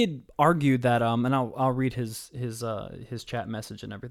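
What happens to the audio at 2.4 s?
Nothing goes wrong at 2.4 s; the speech there plays through intact, with no dropout, click, distortion or other fault.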